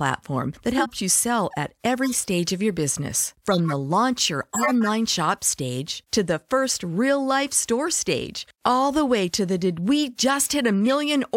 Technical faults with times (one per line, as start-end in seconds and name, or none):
0.77-0.93 corrupt frame decoded
2.04-2.14 corrupt frame decoded
3.52-3.72 corrupt frame decoded
4.53-4.87 corrupt frame decoded
10.88 corrupt frame decoded